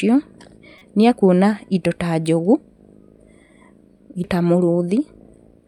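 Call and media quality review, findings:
Damaged data in a compressed stream, 0.78–0.82 s: short glitch right before "nĩ ekuona indo". Decoder likely choked on corrupted frame bytes, lost sync and hunted for the next header. Second hit at 4.24 s: tiny blip, same mechanism. Check transport and storage integrity.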